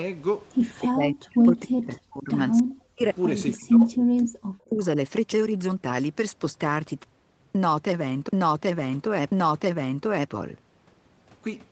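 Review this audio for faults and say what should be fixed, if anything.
The speech dips sharply, by around 40 dB at the deepest, from 0.82 to 2.32 s, 2.62 to 2.72 s, 2.90 to 3.04 s and 3.54 to 4.83 s. This is likely speech suppressed in double talk: with both ends active, the echo canceller mistook the near talker for loudspeaker echo and attenuated it. Loosening the double-talk detector and suppression aggressiveness, or using a headset at the near end, would prevent it.

Brief echo leak appears at 2.57 to 2.62 s and 3.53 to 3.57 s, where a faint copy of the voice arrives about 290 ms late and roughly 30 dB below the speech. Residual loudspeaker pickup is likely slipping past the canceller and returning. Better acoustic isolation or a stronger residual echo suppressor would remove it.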